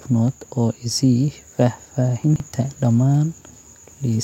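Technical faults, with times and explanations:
2.24–2.4 s, chunks out of order: a brief garbled jumble as one 40 ms chunk plays three chunks late, creating three hard joins.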